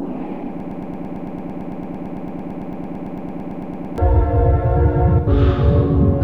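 From 0.60 s to 3.98 s the audio gets stuck in a broken-record loop: a fragment of about 112 ms plays back to back, 30 times over, giving a rapid stutter. The player or stream likely stalled and kept resending its last chunk, so whatever belonged there is gone.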